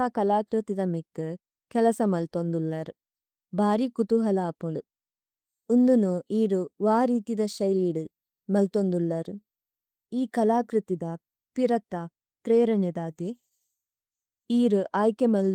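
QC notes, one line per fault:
No faults found in the speech, which carries Opus voice compression at 24 kbps in hybrid mode, fullband, with only light coding texture audible.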